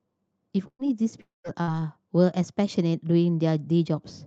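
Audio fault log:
0.67–0.82 s, burst of packet loss: about 120 ms of consecutive packets were lost, so the receiver stretched and faded the last sound into a brief silence, then resumed further on.
1.21–1.47 s, long network dropout: audio likely stopped arriving for about 240 ms. The last sound is continued and fades, leaving roughly 160 ms of silence before speech returns with a portion missing.
1.62–1.70 s, burst of packet loss: about 60 ms of packets failed to arrive, so the receiver briefly held and faded the preceding sound before playback jumped ahead past the gap.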